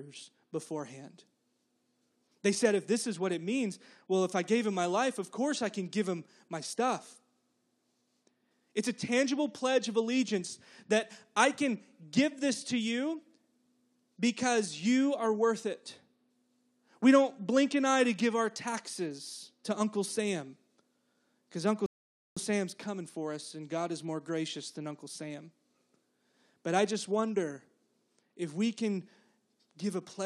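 At 21.86 s the speech halts in a rebuffering stall: the player exhausted its downloaded audio and waited for more data before continuing at 22.37 s. The result is roughly half a second of silence, about 0.50 s added to the running time. Unlike a dropout, where a chunk of audio vanishes and the speech jumps ahead, here playback picks up at exactly the syllable where it stopped, so nothing is missing.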